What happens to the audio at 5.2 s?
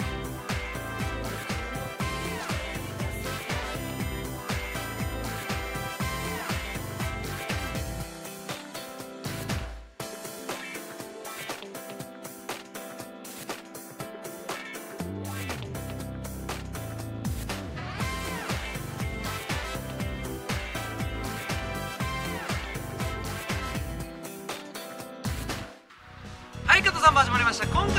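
At 5.2 s the audio carries USB whine, a steady fixed-pitch tone running from about 3.79 s to 7.07 s. It sits on a 1 kHz fundamental, with the 2 kHz harmonic strongest, roughly 15 dB below the signal. The 1 kHz spacing points to the bus's 1 ms frame timing: current drawn in those periodic bursts leaks into the audio path through the shared power or ground, producing the whine.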